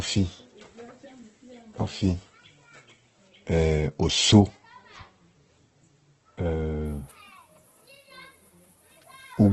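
Throughout the speech, nothing is heard above about 8.2 kHz, and the sound is rough, grainy and noisy. This is likely Opus compression in its music mode, which fits a very low bitrate near 12 kbps. It fills starved bands with folded or noise content.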